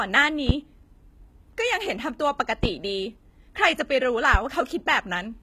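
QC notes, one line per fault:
Throughout: HE-AAC compression, likely the cause of the plainly audible codec damage in this speech. The treble is rebuilt from copied lower bands at what sounds like a 20 kbps rate, so s sounds turn gritty and lispy. On a spectrogram, the upper bands look smeared and repetitive, with nothing above 14.9 kHz.
0.49 s, 2.64 s and 4.34 s: loud pop, three single pops, each lasting about 35 ms and peaking roughly 15 dB above the speech, likely from an electrical step or pulse such as a switch, static or driver glitch. The speech carries on underneath. The waveform shows tall isolated spikes, and a spectrogram shows thin full-height vertical lines.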